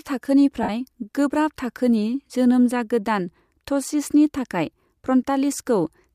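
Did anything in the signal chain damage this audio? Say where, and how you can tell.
Yes, at the Bluetooth link: around 0.63 to 0.69 s, just before "गोब्राब थाखोनि जोनोम जागोदान", lost LE Audio frames leave about 60 ms of noisy smear. That fits roughly eight 7.5 ms frames, with the LC3 decoder likely replaying the last spectrum with scrambled signs and fading it.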